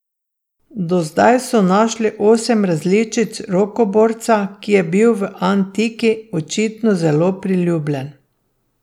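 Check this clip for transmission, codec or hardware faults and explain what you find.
No transmission, codec or hardware faults turn up in this clip.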